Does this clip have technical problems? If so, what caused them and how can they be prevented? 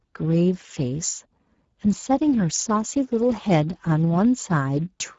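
Yes. Throughout, the speech carries plainly audible Speex codec damage, sounding hoarse and noisy because the CELP coder has too few bits for the excitation, which fits a setting near 10 kbps. A spectrogram shows harmonics turning to diffuse noise above 4 kHz and nothing above 7.6 kHz. To prevent it, encode at a higher Speex quality or use a modern codec such as Opus.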